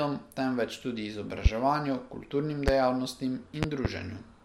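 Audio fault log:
1.46–1.48 s, 2.68–2.71 s, 3.63–3.88 s: loud pop, sharp single pops just after "temveč tudi" and at 2.68 s, then two in quick succession, peaking about 20 dB over the speech, which carries on underneath. A sudden voltage pulse, likely from static or a switching glitch, was added to the signal.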